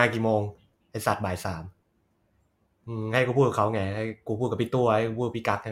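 From 3.26 to 4.26 s the speech shows channel delay (comb filtering): one channel trails the other by roughly a sample, about 0.02 ms, so the mono sum cancels near 20 kHz. It sounds dulled, and a spectrogram shows the top band thinning there.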